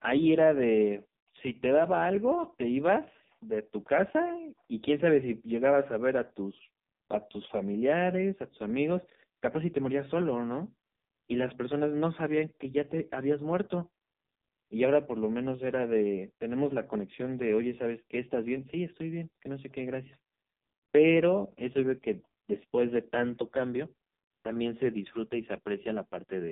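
From start to finish the speech runs through an AMR narrowband mobile codec at 5.15 kbps. Everything above 3.8 kHz is gone, and the heavy damage leaves voices buzzy and synthetic.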